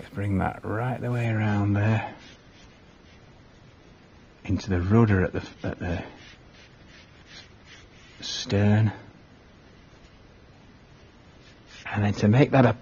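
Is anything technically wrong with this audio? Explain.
Yes. From 1.25 s to the end, the adaptive stream drops to a lower bitrate. The sudden switch fits a lean AAC encoding near 24 kbit/s, so everything above 6.9 kHz vanishes and artefacts thicken. A spectrogram shows an abrupt flat ceiling; the waveform has no gap.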